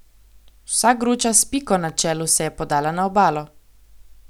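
A speech clip with one electrical switching spike, a sharp snap at 1.89 s, peaking around -25 dBFS, likely from a nearby switch or static discharge arcing into the line.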